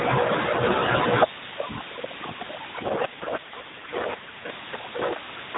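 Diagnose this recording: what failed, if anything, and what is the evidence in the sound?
The fault is an AMR rate drop at the network and codec stage, from 2.8 to 4.5 s. Over that stretch the speech turns rougher and more synthetic, with a buzzy edge. There is no gap and no change in bandwidth, since the narrowband AMR codec still caps everything at 4 kHz. The degradation suggests a switch from 12.2 kbps down to about 5.9 kbps, with fewer excitation pulses per frame, until the higher rate returns at 4.5 s.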